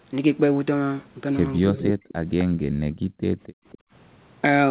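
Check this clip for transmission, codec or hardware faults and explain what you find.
Three kinds of echo-control fault affect this speech, heard through a call path that carries nothing above 4 kHz, which fits a narrowband G.711-type codec.

Echo leak: From 1.56 to 2.44 s a delayed copy of the speech trails the original by 258 ms, only about 5 dB quieter. A faint repeat returns at 3.43 to 3.78 s, about 25 dB down. The likely cause is a loudspeaker end whose echo canceller let its microphone pickup through and sent it back.

Speech suppressed in double talk: Between 1.65 and 2.08 s the talker's speech dips and breaks up in pieces, dropping by as much as about 40 dB over roughly 400 ms. Likely both sides were talking at once, and the canceller, unable to tell the talker from the echo, turned both down.

Background gated by the echo canceller: From 2.5 to 3.92 s the room sound sinks and drops out, falling by up to about 40 dB for roughly a second in total before it returns. 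The canceller clamped the microphone hard while the loudspeaker was playing, then released it.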